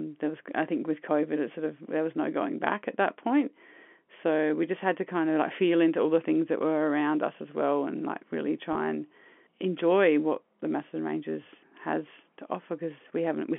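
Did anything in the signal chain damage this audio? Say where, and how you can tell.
Yes, at the network stage: packet loss with pitch repetition from 8.73 to 8.75 s, between "well and like really" and "and enjoy what the". About 20 ms went missing, which fits two 10 ms packets. Instead of going silent or clicking like a buffer underrun, the gap holds briefly with a buzzy repeat of the last pitch cycle. The rest of the clip is narrow telephone-band G.711 audio.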